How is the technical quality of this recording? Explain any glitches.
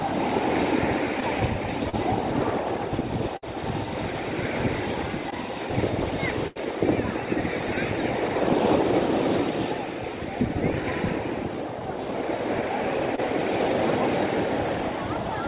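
The recording has six dropouts from lost network packets, heard over a narrowband call channel with nothing above 4 kHz, which fits G.711 mu-law at 64 kbps.

Short concealed packet loss occurs at 1.20–1.23 s, 1.89–1.95 s, 5.30–5.34 s and 13.16–13.20 s. Each time, roughly 20 to 40 ms of audio failed to arrive in time, and the receiver patched the hole by extending the preceding sound, either repeating its pitch period or generating matching noise, before crossfading back. Each event is heard as a brief smear or wobble, and a very short sound may drop out.

Burst of packet loss occurs at 3.37–3.44 s (about 60 ms missing) and 6.47–6.58 s (about 80 ms missing). Several consecutive packets were lost, so the concealment had to stretch the last sound much longer while fading it down. The result is a held buzz or a decaying hiss, after which the audio jumps ahead and that stretch is simply gone.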